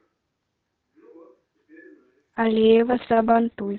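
From 2.38 s to the end, a call bitrate drop coarsens the Opus-coded speech. The audio band narrows from 8 kHz to 4 kHz and turns rough and muffled, which fits the encoder falling from roughly 48 to 6 kbps.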